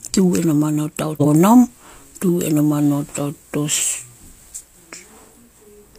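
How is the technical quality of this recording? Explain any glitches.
The recording has one glitch: compressed frames skipped, from 1.12 to 1.25 s. Whole blocks of the encoded speech never reached the output, so the audio leaps ahead by about a fifth of a second. A waveform shows an abrupt change in envelope, and a spectrogram shows the speech pattern breaking discontinuously there.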